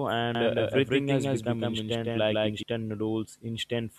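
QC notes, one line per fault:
0.35–2.63 s, doubled audio track: the speech is heard twice, a second full-band copy trailing by roughly 150 ms at about the same level, likely from a slower second capture path. Unlike echo or reverb, it has no decay or room colour and starts and stops abruptly.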